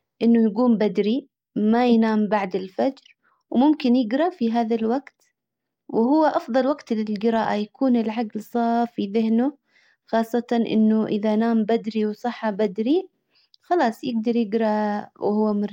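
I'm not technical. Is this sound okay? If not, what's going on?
No. Clock slip clicks run from 0.11 s to 15.69 s: a faint, steady rattle of tiny ticks, about twenty each second, clearest on louder speech and silent in pauses. Two devices likely keep slightly different time, so single samples are dropped or repeated.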